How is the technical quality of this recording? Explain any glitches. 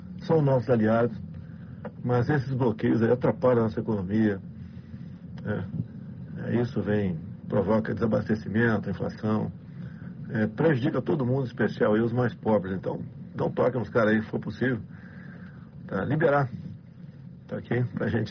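No glitches or faults are audible.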